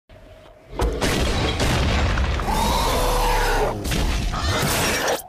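No technical faults can be heard anywhere in the clip. There is nothing in the audio that needs a timestamp or an explanation.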